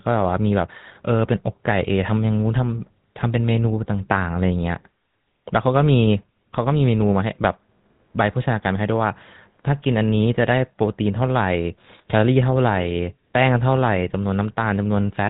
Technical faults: GSM full-rate codec

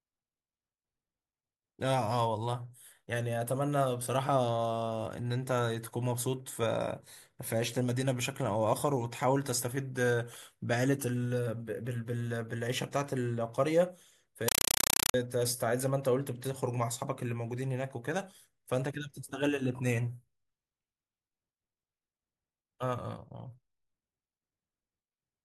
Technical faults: compressed stream played as audio

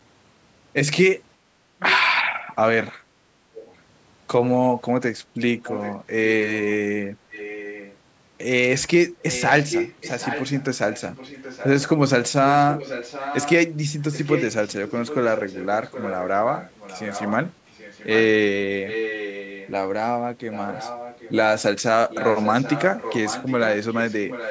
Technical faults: background gated by the echo canceller; echo leak

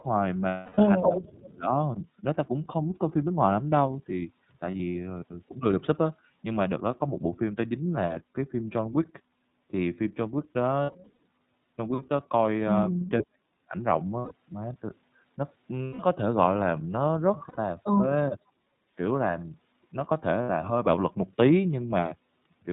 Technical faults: iLBC codec; lost iLBC frames; echo leak; speech suppressed in double talk; background gated by the echo canceller

